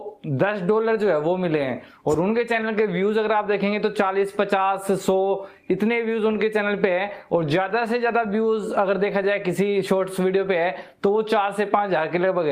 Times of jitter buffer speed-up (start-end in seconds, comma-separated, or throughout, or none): none